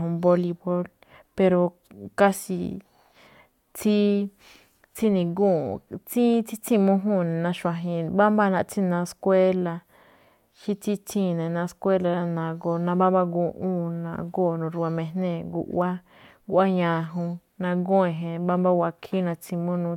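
Nothing in this speech recording stands out as a technical fault at any point.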